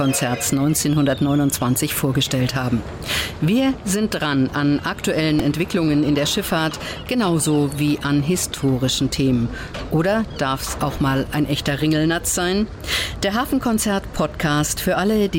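At 5.39 s, a repeated buffer: a roughly 1.3 ms piece, which fits a 64-sample buffer, replays four extra times, heard as a brief buzzy click.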